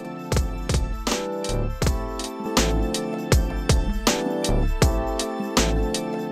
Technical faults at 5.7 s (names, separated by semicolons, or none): none